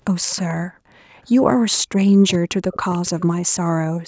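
From 0.21 to 0.43 s a faint delayed copy of the speech, around 20 dB below it and trailing by 438 ms, is an echo leak, likely from a far-end loudspeaker whose echo canceller let some of its own playback back into the call. From 1.25 to 1.53 s the speech dips by up to roughly 20 dB; this is speech suppressed in double talk, likely as the canceller turned down the talker while the other side spoke. The same suppression returns more deeply from 2.21 to 3.07 s, cutting the speech by as much as 40 dB, and overlapping it from 2.93 to 3.26 s the 438 ms echo leaks through again at a similar low level. From 3.78 s to the end the speech is again pushed down by up to about 40 dB in another stretch of double-talk suppression.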